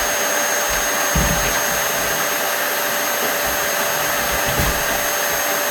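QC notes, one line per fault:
Nothing stood out on listening to this audio.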